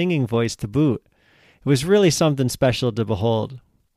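Word clock ticks run from 0.11 to 3.90 s: sharp, single-sample ticks roughly every 0.3 s, about ten in all. They come from an unlocked digital receiver slipping against a clock error of around 70 ppm.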